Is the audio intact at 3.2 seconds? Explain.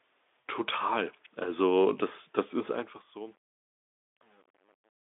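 No. From 2.45 to 5.1 s the fade-out is truncated without dither, with resolution that fits about 9 bits, so by 3.2 s the tail turns gritty.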